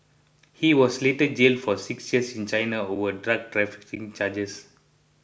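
At 2.96 s and again at 3.96 s, the speech drops into a block of digital silence, 5 ms long the first time and 10 ms the second. Samples were replaced by zeros, most likely because the output buffer was not filled in time. The signal stops and restarts abruptly with no fade. At these lengths the gaps sound less like holes than like sharp ticks.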